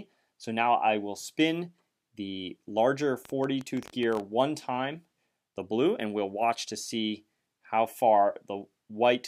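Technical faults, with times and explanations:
3.25–4.21 s, train of clicks: about fifteen unevenly spaced ticks at 14 per second, likely interference pulses, showing as sharp waveform spikes and thin vertical spectrogram lines.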